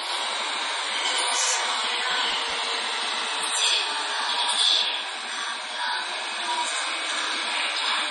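Throughout the clip, each everyday sound is followed by a second copy 92.88 ms later at the same level. This is channel delay (doubling): one channel runs late, which fits a 4096-sample buffer, and the two are summed to mono. Unlike reverb, it gives one clean slap with no decaying tail.

The whole recording also stops dead at 11.1 kHz with nothing above it. This is most likely low-bitrate audio saved at a high bitrate: an MP3 made at about 32 kbit/s and later re-encoded at 256 kbit/s. The higher rate cannot restore the top end the first encoding removed.

From 2.11 to 2.74 s, a gritty tearing crackle rides on the sound. This is processor overload crackle: dozens of audio buffers of around 10 ms each missed their deadlines, and each miss replayed a hard-edged scrap of old audio. Clipping distorts the sound's peaks, but this tearing sits on top of the audio and stops abruptly when the overload ends.

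The same crackle returns from 7.15 to 7.51 s. It is shorter, with about half as many missed buffers, and again it is made of short repeated fragments with hard edges.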